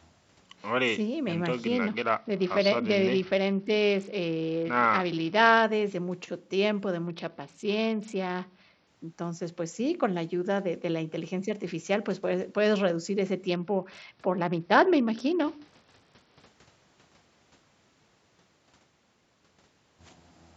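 From 1.75 to 5.64 s, 7.07 to 8.87 s and 13.49 to 16.46 s, a Bluetooth SBC bit pool drop starves the encoder, which fits a bit pool falling from 31 to 8, near 66 kbps. The treble dulls and a gritty noise rises in the speech until the rate recovers.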